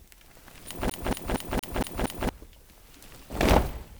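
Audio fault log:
0.90–2.29 s CD stuck on one turn: a 0.23 s slice of sound plays six times in a row, with a brief mute at each jump as the laser falls back one track every rotation. The identical, evenly spaced repeats set it apart from irregular dropout glitches.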